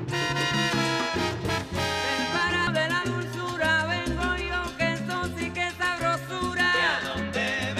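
At 2.67 s some compressed frames get skipped: roughly half a second of audio just vanishes, around five frames of about 93 ms.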